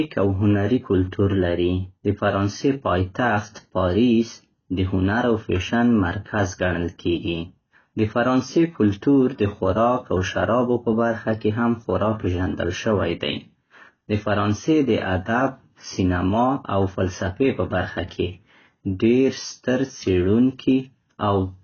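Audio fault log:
Throughout, AAC compression: heavy low-bitrate coding likely lowers the cut-off and starves bands, leaving the speech dull, smeared and fizzy on sibilants, consistent with roughly 16 kbps.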